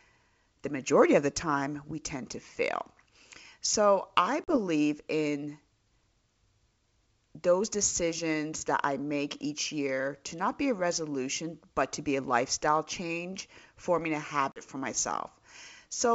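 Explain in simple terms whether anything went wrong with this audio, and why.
Packet loss on an ADPCM call: speech drops to abrupt silence at 4.44–4.57 s and after "lifestyle change forming a" (14.52–14.62 s), then returns briefly slightly distorted while the decoder resyncs, unlike a clean dropout.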